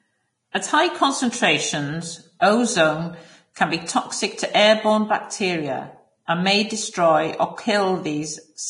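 Throughout the speech the sound is hissy and grainy, with nothing above 10.6 kHz, likely heavy Vorbis compression at a low bitrate, around 30 kbps, quantising the treble into noise. Pre-echo appears from 0.52 to 0.55 s and at 2.40 s, between "high concentrations" and "ozone can be toxic": a brief hiss smears ahead of each attack as block-wide quantisation noise leaks backward.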